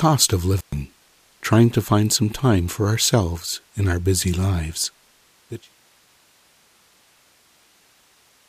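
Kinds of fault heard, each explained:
Intermittent contact: a loose plug or cable in the signal path briefly loses its connection, so the speech drops away for about 118 ms within a disturbance spanning roughly 0.58 to 0.76 s, with crackle at either edge of the break. On a waveform this shows as a sudden near-flat gap bracketed by sharp spiky transients, and a spectrogram shows vertical broadband streaks at the edges around a band of faint noise where the speech energy vanishes. The fade-out ending near 5.7 s is a clean editorial taper, not part of this fault.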